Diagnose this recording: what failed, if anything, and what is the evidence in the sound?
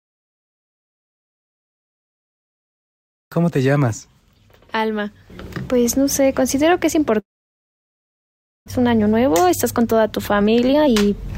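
Network stage, long network dropout, likely caused by packet loss on the link. At 7.19 s the sound is carried on for a moment as a fading buzz from its last few milliseconds, then sinks to silence for most of the gap, which runs to 8.70 s. When audio resumes, about a second of material has simply vanished. That fading tail and the skipped material separate it from a local mute or a recording gap, where nothing would be synthesised and nothing would go missing.

Buffer stage, jitter buffer speed-up. From 8.78 s to 11.28 s the audio plays about 15% fast and sounds hurried, but its pitch stays put. That is the receiver clipping out pitch-period-sized slices to drain roughly 0.4 s of extra delay left over from the dropout. A sample-rate mismatch would raise the pitch along with the speed. Here only the timing changes, and it happens only in the stretch right after the outage.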